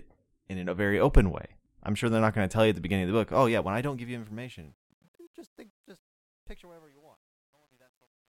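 Starting at 3.32 s, just after "beginning of the book", the speech takes on a gritty, grainy edge as the fade-out begins. From 5.08 s to the end at 8.29 s the grit is at its worst. This is truncation distortion on a fade: the gain stage drops low-order bits without dither, which fits roughly 11-bit resolution, so the quietest part of the waveform collapses into coarse square steps.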